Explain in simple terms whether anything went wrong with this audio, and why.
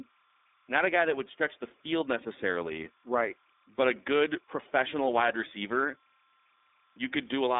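Two things went wrong, and both run the whole way through the speech.

First, there's timecode bleed: a faint, steady chirping warble sits behind the talking. Timecode from a nearby track or cable leaked in, flipping between tones around 1 kHz and 2 kHz, ticking along at 30 frames a second.

Second, the audio went through the iLBC codec, a phone-call codec working in 30 ms chunks. It keeps roughly 250 Hz to 3.6 kHz and drops everything above about 3.8 kHz, so the voice sounds muffled, a bit rough and plainly synthetic.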